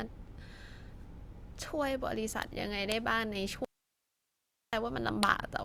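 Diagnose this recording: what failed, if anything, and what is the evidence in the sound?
The speech cuts out abruptly at 3.65 s and returns at 4.73 s, about 1.08 s later. That is an audio dropout to a faint residue. Only hiss remains, roughly 50 dB below the speech. The likely cause is an intermittent analogue connection ahead of a still-live input stage.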